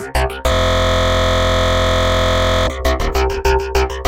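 At 0.52 s the audio locks into a system hang loop until 2.67 s: the machine froze while the hardware kept replaying one 23.22 ms chunk, which fits a 1024-sample buffer. Repeated dozens of times, it becomes a steady buzz at about 43 Hz.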